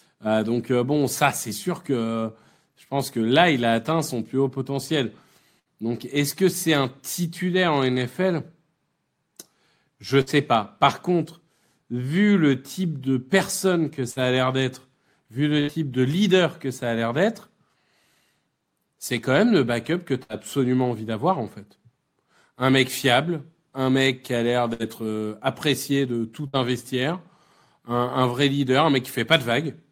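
Seven bursts of packet loss occur, at 5.59, 10.21, 14.11, 15.60, 20.23, 24.73 and 26.47 s. Each time about 60 ms of speech never arrived, so the receiver held the last sound as a fading buzz or hiss for about 60 ms, then resumed further on.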